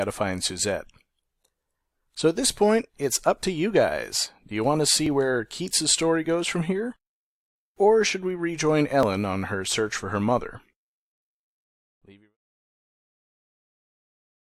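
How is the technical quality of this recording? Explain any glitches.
The recording has two small glitches, both from an overlap between stream segments, at 5.06 s and 9.03 s. At each point the timestamps of neighbouring segments overlapped, and playback discarded the overlapping portion even though that audio had not actually been duplicated. About 6 ms of sound is lost each time, so the waveform jumps abruptly and is heard as a brief click or tiny skip. Both fall on segment joins, which fits 2-second segments. The fade-out from roughly 11 s to 12.37 s is a clean, deliberate edit, not a fault.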